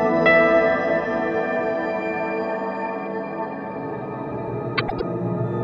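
At 4.78 s the sound turns into a brief garbled flutter that lasts until 5.02 s. This is frames out of order. Two neighbouring runs of coded frames arrived swapped and were decoded in that sequence, which fits runs of four frames each. Each swapped block spans about 104.5 ms. So the stretch plays its second part first, then its first. The result sounds jumbled rather than missing. Nothing is dropped, and the timing afterwards stays intact.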